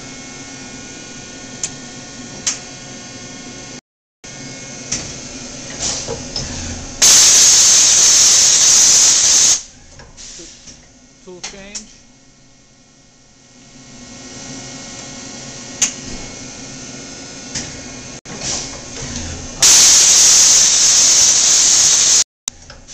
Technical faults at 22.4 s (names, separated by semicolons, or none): digital broadcast dropout